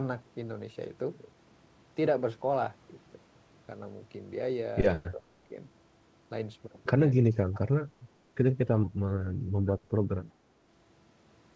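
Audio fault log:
5.14–5.55 s, speech suppressed in double talk: with both ends talking at once, the echo canceller likely mistook the near talker for loudspeaker echo and pulled its gain down along with it. The speech sinks by roughly 20 dB at its deepest, for about 0.3 s in total across the span. It recovers once the overlap ends, and the band stops near 8 kHz as it does elsewhere on this wideband call path.
7.54–7.69 s, echo leak: the far end's echo canceller likely let part of its microphone pickup of the loudspeaker slip through, and that residue came back down the line. A faint delayed copy of the speech, trailing the original by 364 ms and sitting around 25 dB below it, surfaces as a brief ghostly scrap lasting about 0.15 s.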